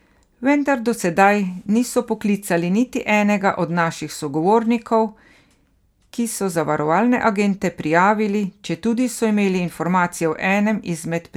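Nothing in this speech recording points to a technical fault at any moment in the signal.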